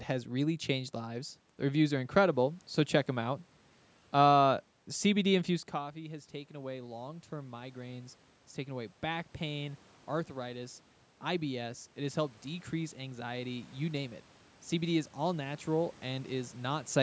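Automatic gain rising runs from 5.74 to 9.83 s. Just before it, at around 5.5 s, the talker moves away and the voice arriving at the microphone drops by about 14 dB. The gain control hears the quieter input and slowly raises its gain by about 6 dB over roughly four seconds. The voice and the room noise swell together, so the voice comes back only partway while the background gets louder.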